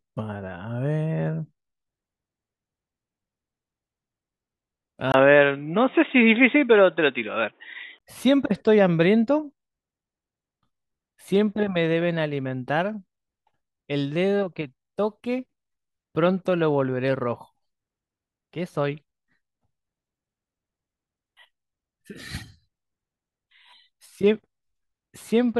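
From 5.12 to 8.01 s the input was likely switched to a poorer device, with a brief 20 ms gap at the switch. The speech turns dull and boxy with nothing above 3.8 kHz, shifts in level by about 5 dB, and picks up faint new background noise.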